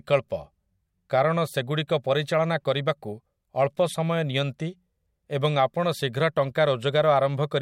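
A corrupt frame decoded from 6.41 to 6.50 s interrupts the speech with a brief chirpy burst, roughly 90 ms long, which fits a handful of consecutive damaged frames. Flipped bits in the compressed data gave the decoder wrong gains and misread spectral codes, and it played them anyway, putting energy at frequencies where none belonged. The spurious sound peaks somewhere around -30 dBFS, a sharp squeak-like blip riding over the speech.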